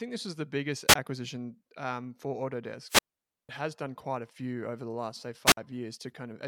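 At 0.88 s the speech breaks in a wireless microphone squelch dropout. The radio signal fades and hiss rises. Then the receiver's squelch mutes the output for about 19 ms before the voice returns. At 2.87 s it happens again and lasts until 3.49 s. This time the hole of near silence runs about half a second. A third dropout, from 5.45 to 5.57 s, mutes for about 54 ms.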